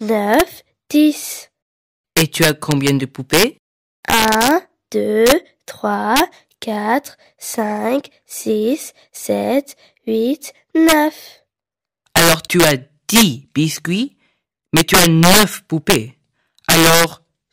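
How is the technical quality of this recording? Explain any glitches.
The recording's quality is compromised by one fault. Integer overflow runs throughout: with about 9 dB of overdrive, the loudest peaks, under one percent of samples, wrap to the opposite sign and crack sharply.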